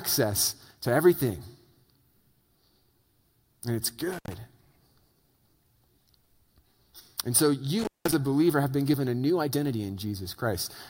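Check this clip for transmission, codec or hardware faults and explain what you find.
Intermittent contact at 4.13 to 4.34 s and 7.79 to 8.14 s: a loose cable or plug briefly opens, dropping the speech for about 100 ms and 183 ms, with crackle at each edge and faint hiss in the gap.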